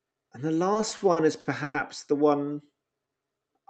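From 0.73 to 1.77 s, packets kept arriving late, so the jitter buffer ran dry seven times and the receiver had to stretch the last sound to cover each gap. This is repeated stalls (stutter): about 290 ms of filler in total, roughly 28% of that stretch, with the longest hold at 110 ms. No speech is actually lost, but the delivery catches and drags in a halting rhythm until just before "the one".

Right after "the one", from 3.05 to 3.68 s, the jitter buffer was low or had just raised its target delay, and it rebuilt its reserve by repeating single pitch periods and slivers of pause. This is a jitter buffer slow-down, adding about 95 ms so that this stretch plays at 86% speed. The pitch stays put while the sounds are drawn out. All of this is heard over the call path's Opus coding, which tops out at 8 kHz.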